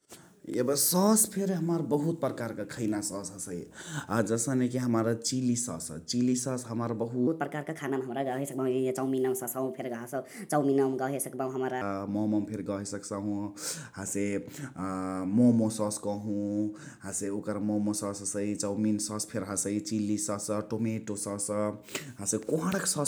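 From 7.27 to 11.82 s there's a section at the wrong speed: the speech runs 1.3 times fast, pitch up about five semitones, likely from a clock mismatch.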